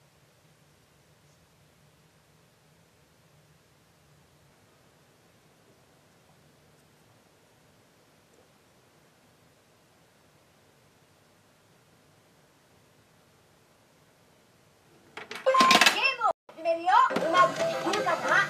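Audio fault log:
16.31 to 16.49 s, playback stall: the sound cuts out in mid-flow for about 178 ms, then picks up again. Silence of this kind likely means the player ran short of data or its thread was held up, so nothing reached the output until it recovered.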